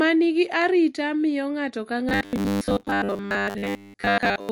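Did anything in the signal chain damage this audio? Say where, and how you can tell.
Yes. The codec stage shows damage across the whole recording. The voice has a plainly audible watery, swirling quality, with sibilants chirping and consonant attacks smearing. This is MP3 compression, likely at a low bitrate around 48 kbps. Short of bits, the encoder is dropping weak spectral lines that flicker in and out between frames.

From 2.09 s to the end at 4.51 s, the driver or buffer stage fails. The voice turns into a rigid, metallic buzz pitched at 100 Hz that still loosely tracks the speech contour. This is robotic sound from repeated short buffers, likely caused by audio arriving late. The software fills the gaps by looping the last 10 ms segment, which fixes the pitch at one over that length. For most of this stretch the playback is repeated material instead of real audio.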